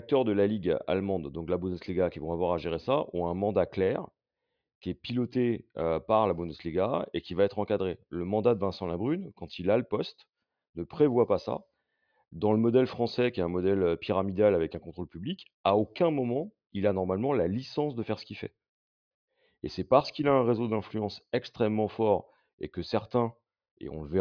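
No technical faults are audible anywhere in the speech recording.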